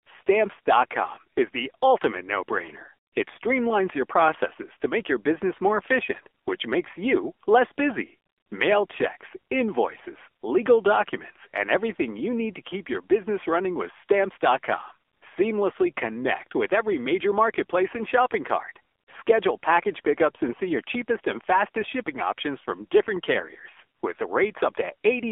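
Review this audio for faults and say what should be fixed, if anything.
The whole clip of speech carries AMR narrowband mobile codec damage. Nothing sounds above about 3.5 kHz or below 300 Hz. The vocal tract model runs short of bits, so voices turn buzzy and synthetic. That points to a low mode, around 7.4 kbps. To prevent it, record locally or use a wideband, higher-bitrate path instead of a narrowband mobile call.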